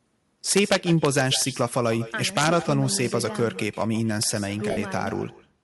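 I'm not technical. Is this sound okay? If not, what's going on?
No, this speech has four distinct problems.

Echo with no canceller runs through the whole clip. Every phrase is followed, roughly 0.15 s later, by a fainter, thinner copy of itself. The far end is playing the call out loud and its microphone sends it straight back, with nothing removing it. A room's reverberation blurs the sound into a smooth tail. This is a distinct delayed repeat of the talker.

Bluetooth LC3 compression also affects the whole clip. The voice has a breathy, grainy, hissy edge, most noticeable on the higher, airy parts of the sound. That roughness is likely caused by the LC3 codec used by Bluetooth LE Audio, which saves data by throwing away much of the upper range and filling the gap with noise. Background hiss would sit evenly underneath. This graininess rides along with the voice itself.

Integer overflow shows up as harsh, violent cracks on the loudest moments, from 0.51 to 1.42 s, again from 2.37 to 2.47 s, and as a single crack at 4.23 s. 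The level went past the largest value the system can store, and instead of stopping at the limit, it wrapped around to the opposite extreme. Ordinary clipping flattens loud peaks into a buzzy distortion, but these snaps are far sharper and more abrupt.

Lost LE Audio frames cause a brief smear from 4.71 to 4.77 s, about 60 ms long. Some Bluetooth audio went missing, and the receiving end filled the gap by replaying the last bit of sound with its character scrambled. What should be clear voice turns into a short noisy wash. A plain dropout would leave a hole of silence, but here the gap is covered with this blurred, hissy patch.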